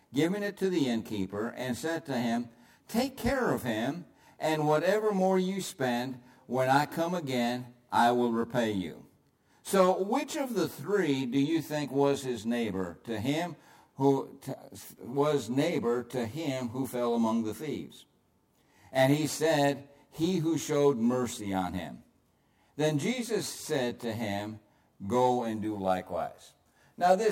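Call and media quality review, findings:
Channel delay (comb filtering), throughout. Rough, slightly doubled tone. One channel lags the other by around 20 ms before the mono sum. Shared content cancels at evenly spaced frequencies, first notch near 20 Hz, then tightly packed fixed notches. Check the stereo-to-mono path.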